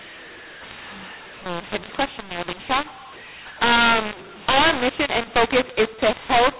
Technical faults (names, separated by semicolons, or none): mu-law and A-law mixed up